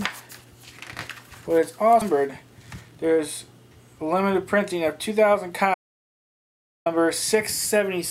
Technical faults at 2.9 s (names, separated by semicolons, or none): jitter buffer speed-up